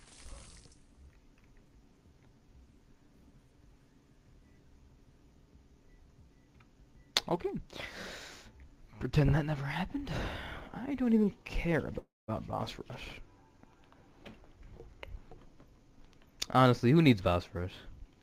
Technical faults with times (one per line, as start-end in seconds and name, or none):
11.98-12.30 call audio freeze
14.87-16.81 jitter buffer speed-up